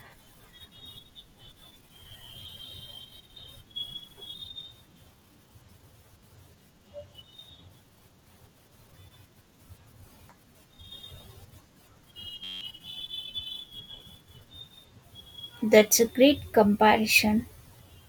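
At 12.44 s the speech stops and a system hang loop takes over until 12.61 s. The computer or audio driver stalled while the sound hardware kept replaying the same ring buffer, so a 10.67 ms slice repeats exactly, which fits a 512-sample buffer. Because the loop is so short, it sounds like a steady buzz at about 93.8 Hz. Roughly 150 ms of the original audio is missing where the loop sits.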